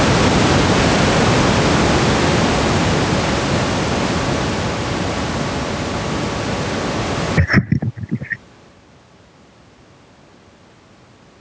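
Gain pumping runs through the whole speech clip: loud and soft parts end up closer in level and the sound is squashed, a swing of around 30 dB, likely from excessive microphone gain driving a fast limiter. Unlike a noise gate, the noise never cuts out entirely.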